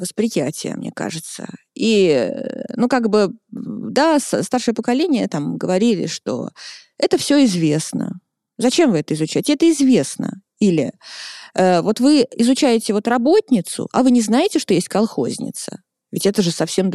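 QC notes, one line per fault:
No audible faults detected.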